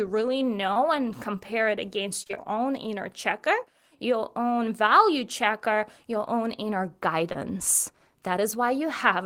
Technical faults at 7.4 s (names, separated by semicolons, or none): short concealed packet loss